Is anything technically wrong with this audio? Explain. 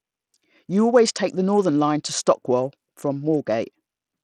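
Yes. The whole speech clip carries what sounds like Bluetooth SBC compression, and it's plainly audible from start to finish. The treble thins out and flickers, with a gritty, grainy edge sitting on the speech. That's likely SBC running lean, around 80 kbps by ear: the codec splits the signal into a handful of wide bands and doles out bits crudely, so the upper bands get starved and the rest gets quantised coarsely, leaving that rough, aliased top end.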